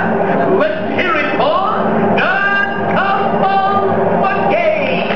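Nothing to flag: no dropouts, clicks, distortion or level jumps are audible anywhere in the audio.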